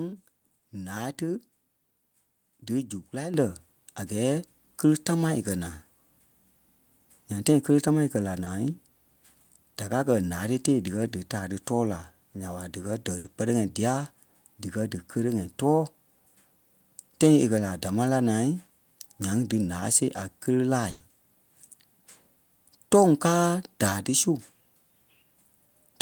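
Speech, with packets arriving too late and an automatic microphone gain control. Twice, a few hundredths of a second of audio failed to reach the decoder in time, causing short concealed packet loss. The receiver patched each hole by continuing the preceding sound and then blending back. At 0.59–0.64 s, just before "ǹáa tí", about 30 ms is synthesized and 20 ms of the real signal is gone. At 8.44–8.48 s, about 20 ms is filled and 20 ms is lost. Each is heard as a brief smear or wobble.

The call software also judged the microphone too quiet and raised the device's input volume in single steps. The microphone volume stepped up by about 7 dB at 3.34 s and by about 1 dB at 4.36 s, just before "kele támaa e". The voice and the background jump in level together at each point, the second step being only slight.

Finally, there are two bursts of packet loss, where consecutive audio went missing or arrived too late to play. 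The receiver extended the last sound while turning it down, so each gap becomes a held buzz or fading hiss before the speech resumes further on. The first, at 13.18–13.26 s right after "nya ɓa díkɛ dɛ", fills about 60 ms. The second, at 20.90–21.02 s, fills about 100 ms with no silence, and the original audio in between is lost.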